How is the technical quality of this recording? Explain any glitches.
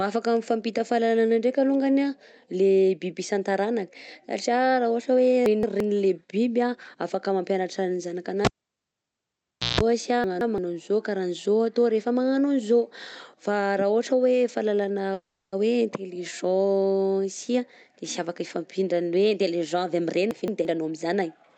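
The recording has several distinct glitches spread through the speech. All of them are transport and handling faults rather than problems with the source. Throughout, the high end stops near 8 kHz, which fits the call codec's bandwidth.

Chunks out of order occur at 5.46–5.80 s, 10.24–10.58 s (just before "an'zao kara an'zao atao") and 20.31–20.65 s. In each case a piece of about 171 ms plays one chunk late, after the audio that should follow it, so the sound jumps back and forth. On the waveform you would see abrupt discontinuities at the joins. On the spectrogram these show as vertical click lines and a visibly shuffled pattern.

A cable pulled and plugged in happens at 8.45–9.81 s, right after "afaka mampianatra ny". A pop is followed by about 1.3 s of near silence while the connection is broken. Then comes a 164 ms burst of 60 Hz mains buzz as the plug makes partial contact, and a second pop when the sound returns. 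A spectrogram would show 60 Hz harmonic stripes between two broadband spikes.

A call audio freeze runs from 15.13 to 15.54 s, after "raha ohatra hoe fahalalana". The sound stalls and the last moment is stretched into a fading buzzy tail for 390 ms. The audio then resumes exactly where it stopped, with nothing missing. The likely cause is delayed packets draining the jitter buffer. On a spectrogram this looks like smeared, frozen horizontal bands.

Jitter buffer speed-up occurs twice. From 17.18 to 17.61 s the speech runs at 119% speed, with roughly a tenth of a second removed. From 18.03 to 21.22 s it runs at 108%, with about 0.3 s removed. Tiny pitch-period slices are cut repeatedly, so the speech sounds hurried at unchanged pitch. The waveform shows slightly compressed syllables, and the pitch harmonics stay level on the spectrogram.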